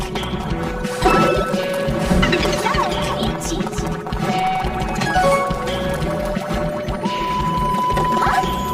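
Throughout the audio, the sound is hollow and phasey, with a fixed coloration. This is channel delay (comb filtering): one channel arrives around 5 ms late, and when the two are summed to mono, shared content cancels at evenly spaced notches from around 100 Hz upward.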